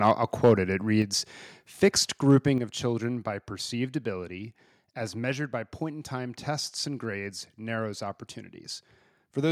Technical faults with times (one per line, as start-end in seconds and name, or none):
0.04-0.11 microphone overload
0.44-0.52 microphone overload
1.02 microphone volume stepped down
2.30-2.36 microphone overload
2.58 microphone volume stepped down